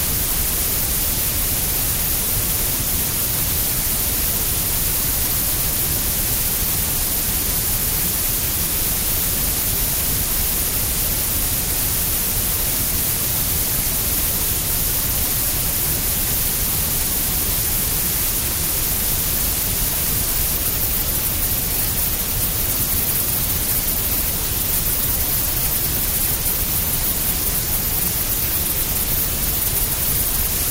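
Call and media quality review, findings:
Nothing stood out on listening to the recording of sounds.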